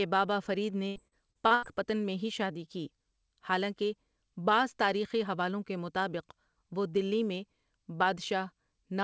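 From 0.88 to 1.65 s, between "بابا فرید" and "میں ہی شادی کی", repeated packet loss (robotic sound) chops the speech: several closely spaced dropouts, the longest about 79 ms, are patched by extending the previous sound, so roughly a third of the stretch comes out robotic.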